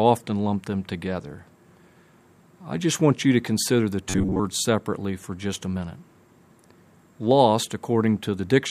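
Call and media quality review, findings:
Robotic sound from repeated short buffers, 4.09–4.40 s: fixed 93.8 Hz metallic buzz, unlike dropout silence; likely starved buffer looping about 11 ms, most audio skipped.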